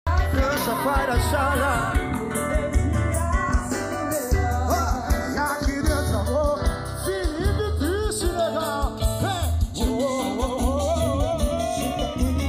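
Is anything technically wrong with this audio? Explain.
Yes. Throughout, the channels drift apart: separate clocks differing by roughly 20 ppm let the inter-channel delay grow to about a third of a millisecond, sweeping comb notches in mono as slow flanging.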